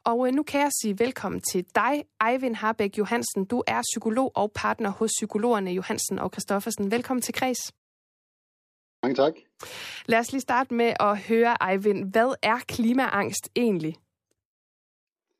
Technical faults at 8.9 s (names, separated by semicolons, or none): clipped start after a pause